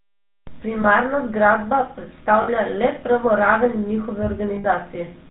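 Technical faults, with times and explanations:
Throughout, GSM full-rate codec: a vocal-tract model driven by sparse regular pulses, which fits a 13 kbps rate, leaves the speech buzzy and gravelly, with nothing above 4 kHz.
0.82 to 0.85 s, 2.42 to 2.49 s, 4.56 to 4.67 s, lost GSM frames: each gap is filled by repeating the last good frame, a brief metallic ring rather than a clean dropout, longest at 4.56 s.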